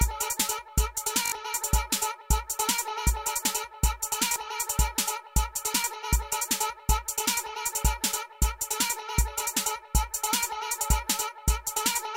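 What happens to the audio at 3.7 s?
Nothing goes wrong at 3.7 s; the audio there plays through cleanly, with no dropout, click, distortion or other fault.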